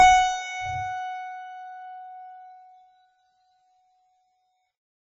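From start to finish the music sounds watery and swirly, with everything above 7.7 kHz simply gone, leaving a dull, boxed-in top end, and the damage is heavy throughout. This is likely MP3 compression starved of bits, which fits a bitrate around 16 kbps: the encoder chops the treble at a fixed point and drops quieter frequency lines that flicker in and out between frames, producing the churning texture and smeared attacks.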